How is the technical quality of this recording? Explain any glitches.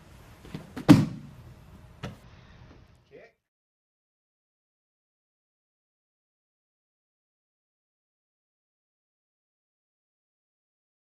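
The recording has one clear fault: a Bluetooth SBC bit pool drop from about 2.23 s to 5.82 s. For those few seconds the treble goes dull and a gritty noise rides on the sound. Both clear up once the passage ends. The link was probably congested, so the sending device cut the bit budget per frame. The top sub-bands then got almost no bits, and the rest were quantised coarsely. The dulling and grit point to a steep drop, from a bit pool near 28 to one near 8, or about 72 kbps.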